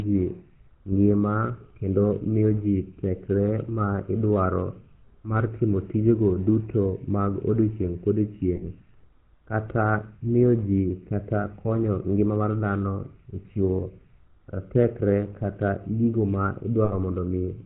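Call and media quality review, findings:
GSM full-rate codec throughout: buzzy, gravelly roughness on speech, nothing above 4 kHz. Pulse-train excitation through a vocal-tract model, consistent with 13 kbps full rate. Damage plainly audible.

Lost GSM frames at 8.56 s (after "mag odiochieng'", 60 ms) and 16.84 s (80 ms): rough metallic ring. Last good frame repeated, fitting three and four 20 ms frames.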